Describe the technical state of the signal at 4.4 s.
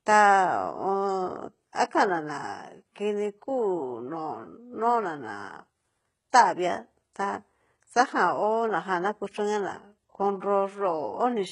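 HE-AAC compression is present at 4.4 s and throughout the clip. The treble is likely rebuilt from copied lower bands, so sibilants turn gritty and metallic, with nothing above 11.1 kHz.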